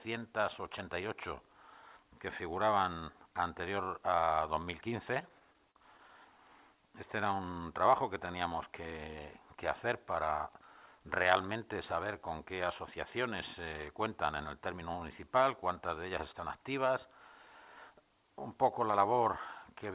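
From 4.90 to 6.11 s there are repeated stalls (stutter). The jitter buffer kept running dry, so the last sound was stretched through more than a dozen short gaps, the longest 41 ms. The audio drags without losing anything. From 16.32 to 17.40 s a jitter buffer speed-up trims around 70 ms of pitch-period slices to shed excess delay, so the audio runs about 7% fast at unchanged pitch. Throughout, nothing is heard above 4 kHz, which fits a G.711 call path.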